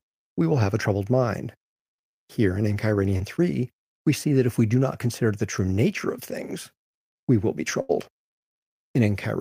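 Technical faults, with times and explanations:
3.17 to 3.21 s, short concealed packet loss: about 20 ms of speech went missing and was filled by extending the preceding sound, leaving a brief smear; the spectrogram shows a smoothed, repeated patch.
7.81 to 7.91 s, burst of packet loss: about 80 ms never arrived in time, so the last sound was held and faded before speech resumed further on; the waveform shows a decaying stretch.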